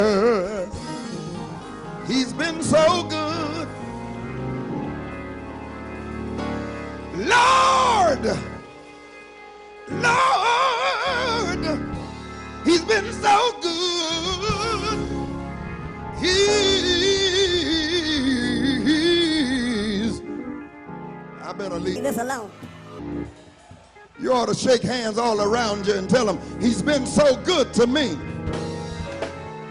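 From 21.96 s to 22.99 s, for about a second, the sound abruptly turns high and hurried, running 1.45 times faster and jumping roughly 6.45 semitones up in pitch before snapping back. This is a wrong sample rate fault: the samples were pushed out faster than they were captured, with no rate conversion, so timing and pitch shifted together by the same ratio, which fits audio recorded near 22 kHz being played at 32 kHz.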